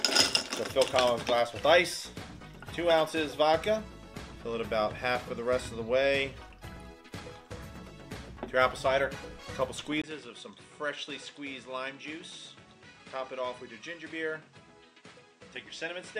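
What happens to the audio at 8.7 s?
Nothing goes wrong at 8.7 s; the sound carries on intact through that moment, with no dropout, click, distortion or other fault.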